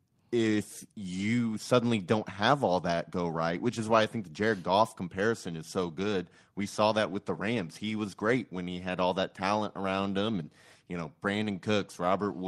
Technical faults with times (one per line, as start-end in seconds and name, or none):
none